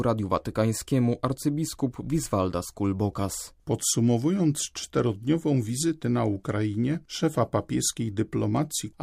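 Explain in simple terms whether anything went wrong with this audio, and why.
Faint, regular ticks, known as clock slip clicks, run through the speech from 0.23 s to 8.59 s, roughly every 0.7 s, about ten in all. They most likely come from two devices' clocks drifting apart by a tiny amount, so single samples get dropped or repeated.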